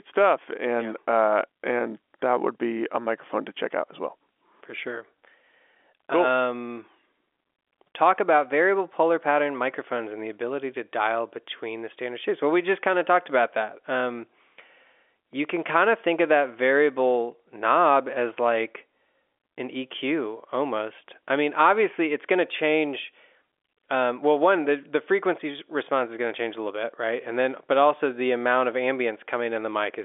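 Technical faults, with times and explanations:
Nothing stood out on listening to the speech, which comes over the telephone band of G.711 telephone coding with nothing heard above about 3.7 kHz.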